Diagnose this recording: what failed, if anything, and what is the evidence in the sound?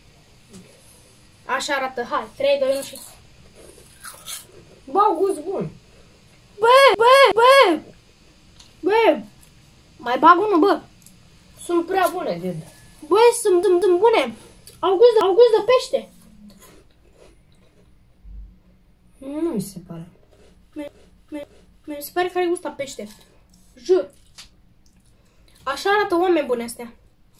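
The failure is at the codec or storage stage: repeated frames. At 6.95 to 7.69 s a 0.37 s block plays twice more. At 13.63 to 14.00 s a 0.19 s block repeats twice. At 15.21 to 15.58 s a 0.37 s block repeats once. At 20.88 to 21.99 s a 0.56 s block repeats twice. Each repeat is an audible stutter. Runs of encoded frames were written again, so the decoder replayed them. The clip grows by about 2.6 s.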